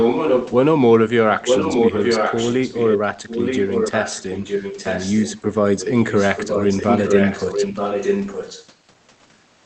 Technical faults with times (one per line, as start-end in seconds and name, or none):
0.00-0.51 echo leak
1.45-2.98 echo leak
3.28-5.41 echo leak
5.78-8.67 echo leak